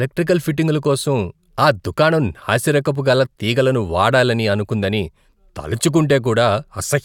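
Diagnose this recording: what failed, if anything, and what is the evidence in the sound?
Nothing failed in this recording.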